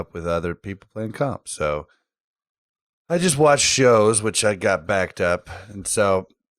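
No technical faults are audible anywhere in the speech.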